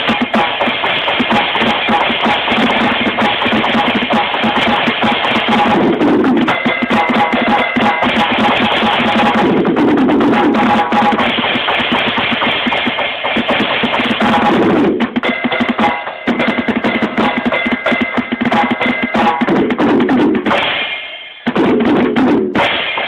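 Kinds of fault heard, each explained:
No technical faults are audible anywhere in the clip.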